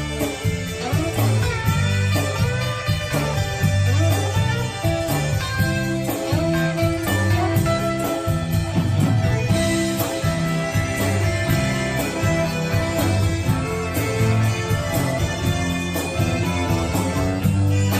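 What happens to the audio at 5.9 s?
Nothing goes wrong at 5.9 s; the audio carries on intact through that moment, with no dropout, click, glitch or other fault to be heard.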